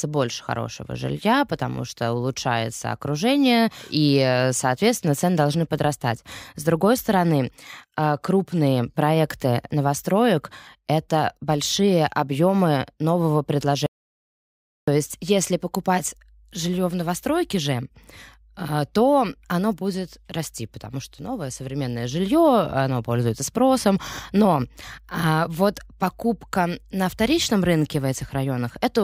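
Speech that cuts out abruptly at 13.86 s and stays in dead silence until 14.88 s, with no room tone or background hiss in the gap, before the talker returns mid-flow. This is an audio dropout to silence, and roughly a second of the speech is simply missing. The cause was likely a momentary loss of the input signal, such as a disconnected device, a broken link or an accidental mute, while the recording carried on writing silence.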